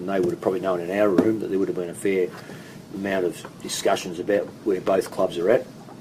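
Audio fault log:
2.74 to 6.01 s, adaptive stream at a lower bitrate: at 2.74 s the quality drops abruptly and stays low to the end. Codec artefacts rise, which fits the player switching to a lower-bitrate rendition, roughly 64 down to 24 kbit/s Opus, after the connection slowed. Unlike a dropout or buffering stall, playback never breaks. Unlike a fixed low-pass filter, the degradation begins at one instant rather than being present throughout.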